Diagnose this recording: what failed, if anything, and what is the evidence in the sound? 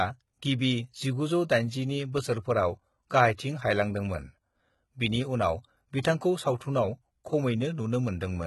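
Throughout the speech, sibilants sound gritty and metallic, and nothing reaches above 11.8 kHz. This points to the codec stage, likely HE-AAC compression at a very low bitrate around 16 kbps, rebuilding treble by copying lower bands upward.

At 6.58 to 6.61 s, a brief hiss of about 29 ms precedes a sharp attack, which sounds softened. This is pre-echo from the same codec. Quantisation noise spread across the transform block leaks into the quiet moment before the onset.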